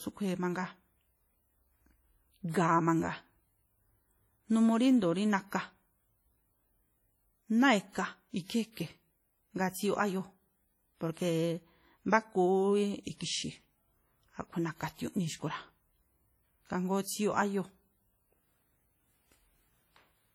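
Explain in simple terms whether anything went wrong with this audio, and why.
The speech appears to have been squeezed hard by an older audio compression format, likely WMA compression. This kind of encoder chops the sound into long blocks and throws away detail it judges unimportant, heavily in this case. Across the whole 20-second clip that leaves the speech sounding washy and ringing, with a hiss that rises and falls along with the talking instead of staying steady in the background.

The same block-based squeezing also causes pre-echo at two moments, around 2.49 to 2.54 seconds and around 17.02 to 17.06 seconds. When a sudden, sharp sound lands near the end of a block, the encoder spreads its noise across the entire block, including the quiet instant just before that sound. You hear a brief hiss arriving early, about 48 and 41 milliseconds ahead, and the attack itself comes out softened and smeared.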